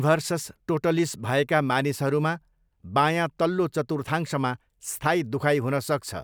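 The speech recording has no audible technical faults anywhere in the signal.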